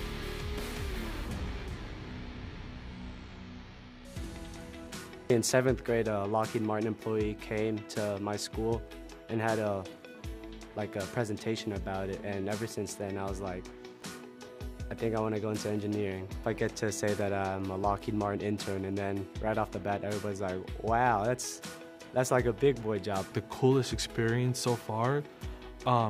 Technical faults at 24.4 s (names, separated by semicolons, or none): none